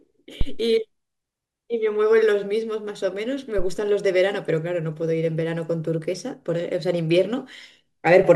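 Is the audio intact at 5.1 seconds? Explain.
Yes, at 5.1 seconds the speech is intact, with no dropout, click, distortion or other audible fault at that moment.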